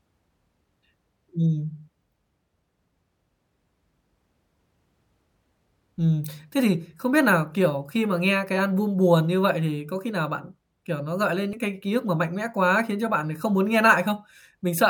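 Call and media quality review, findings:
Audio missing between chunks at 11.53 s: brief skip, about 40 ms of speech gone, the two sides butted together with no gap. The waveform shows an abrupt discontinuity, and the spectrogram shows a vertical seam where harmonic tracks jump. Likely recorder chunk rollover, consistent with 6 s chunks.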